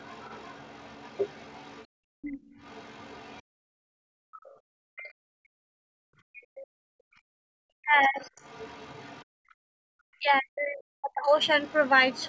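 From the start to 6.67 s, the echo canceller likely failed to remove all of the far end's loudspeaker playback from the microphone, so the other side's voice leaks through as a faint second voice beneath the talker, around 25 dB down. Overlapping this, from 1.87 to 7.41 s, the canceller clamps the microphone hard whenever the loudspeaker is active, producing background gated by the echo canceller. The room tone drops by about 40 dB in bursts totalling roughly four seconds, then returns each time the canceller releases.

From 7.69 to 8.35 s both sides talk at once. The canceller likely could not tell its own talker from the loudspeaker echo, so the result is speech suppressed in double talk. The near talker's voice dips deeply, by around 40 dB, for about half a second in all.

Overlapping this, from 8.2 to 9.24 s, the other side's voice leaks through again at a similarly low level. It is followed from 9.25 to 9.91 s by another gating of the background, dropping about 40 dB for roughly 0.7 s.

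Double-talk suppression returns from 10.19 to 11.35 s, cutting the talker's voice for about a second in total.

From 11.42 s to the end, the leaked far-end voice is back, fainter still, around 30 dB below the talker, sitting within the call's normal band that stops at 8 kHz.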